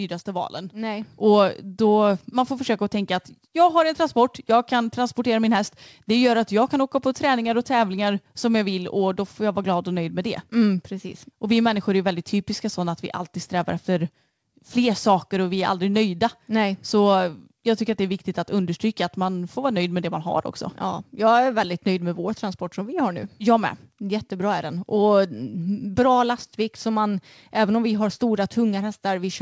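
At 1.02 s the speech and its background jump up together by about 6 dB, a sudden step in loudness with no change in tone. This is a microphone volume stepped up fault: the call software judged the input too quiet and raised the device's input volume in a single step. The audio reaches the listener through a call path whose codec leaves nothing above 8 kHz.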